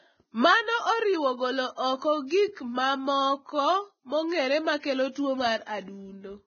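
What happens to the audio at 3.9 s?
At 3.9 s the speech carries the same damage heard across the whole clip, most likely from heavy Vorbis compression. Nothing is present above about 6.5 kHz, and the treble below that cut-off is so coarsely quantised that its fine detail is replaced by noise of similar energy. The result is a hissy, grainy top end, roughened tones and softened consonant attacks. That depth of damage points to a very low bitrate, in the region of 16 kbps.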